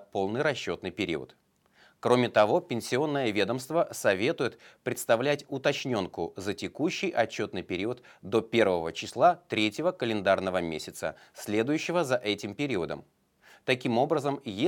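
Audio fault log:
No fault is heard anywhere in this speech clip.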